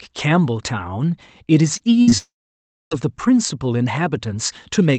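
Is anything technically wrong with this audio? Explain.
Yes, this speech arrives over a call path whose Opus-like coding tops out near 8 kHz, and several network faults interrupt it.

Short concealed packet loss at 1.77–1.81 s and 2.09–2.14 s: about 20 ms of audio never arrived and was patched by extending the preceding sound. It is heard as a brief smear.

A burst of packet loss at 2.01–2.09 s: about 60 ms went missing in a row. The receiver stretched the last sound and faded it, leaving a held, dimming sound that looks like a tapering band before the speech jumps forward.

A long network dropout from 2.18 to 2.93 s: about 0.74 s is gone, most likely because the connection stalled. A fading concealment tail gives way to roughly 0.6 s of silence, which appears as a flat waveform and an empty spectrogram.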